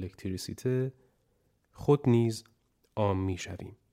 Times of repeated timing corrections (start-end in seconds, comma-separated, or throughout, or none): none